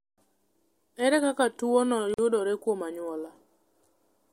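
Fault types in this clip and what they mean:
Gap at a join of encoded pieces: from 2.14 to 2.18 s, between "kaka tuwono" and "yudore kuom anyuola", the speech drops into a 44.5 ms silence with smeared edges. Separately encoded pieces were joined untrimmed, leaving encoder start delay and final-frame padding in place.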